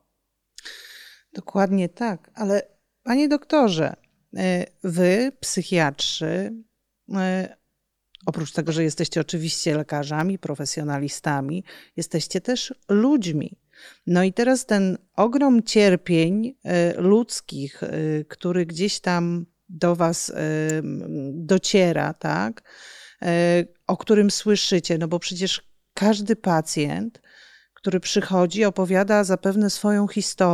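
At 10.20 s, between "tego że jesteście oczywiście" and "profesjonalistami jesteście też", and again at 20.70 s, a sharp snap sits on top of the speech: an electrical switching spike, likely a nearby switch arcing into the line. The speech continues unbroken underneath, which sets it apart from a dropout. The second snap is somewhat louder.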